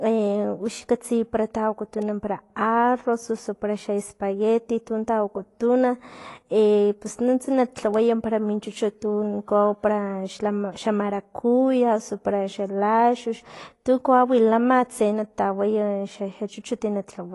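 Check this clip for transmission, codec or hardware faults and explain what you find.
One codec fault runs through the whole speech clip. The sound is dull and smeared, with a watery, fizzy texture on sibilants and held vowels, and nothing above about 11.5 kHz. This is likely AAC compression at a low bitrate, which fits roughly 32 kbps AAC-LC: the encoder drops the top band and coarsely quantises what remains.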